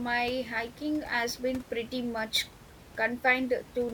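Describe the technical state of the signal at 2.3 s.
At 2.3 s the signal is intact, with only the room's own background noise sitting about 20 dB below the speech.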